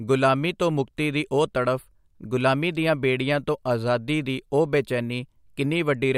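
Nothing here needs flagging, since the speech runs along without a single technical hiccup to point to.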